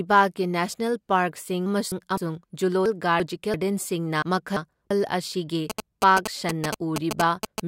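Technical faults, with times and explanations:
1.66–2.18 s, 2.86–3.54 s and 4.22–4.91 s: frames out of order. In each stretch two adjacent blocks of audio play with their halves swapped, about 256 ms each in the first and about 341 ms each in the later two, which fits runs of three and then four codec frames. The sound becomes a garbled flutter, though no time is lost. On a spectrogram the spectral patterns jump abruptly at each join, and the waveform shows discontinuities there.
5.70–7.60 s: GSM signalling bursts. A nearby 2G phone's intermittent radio bursts are being rectified in the audio circuit, producing a galloping dit-dit-dit of short buzzes at 217 Hz, roughly as loud as the speech. A spectrogram shows repeated vertical stripes with a comb of 217 Hz harmonics.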